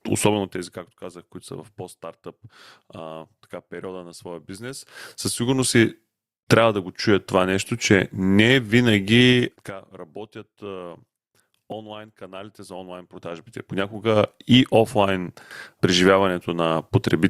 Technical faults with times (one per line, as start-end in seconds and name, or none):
0.28-0.93 zipper noise
4.64-5.94 zipper noise
9.29-9.75 zipper noise
13.00-14.30 zipper noise